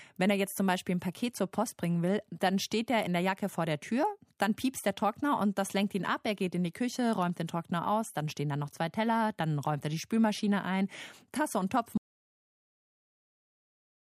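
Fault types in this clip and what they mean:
Audio dropout to silence: from 11.98 s the speech cuts to silence with no room tone to the end, likely lost input while recording continued.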